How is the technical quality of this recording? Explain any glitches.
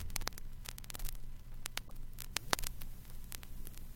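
One glitch stands out. From 1.84 to 1.91 s there is damaged data in a compressed stream: corrupt bytes make the decoder misread frames and lose sync, producing a brief glitch while it searches for the next frame header.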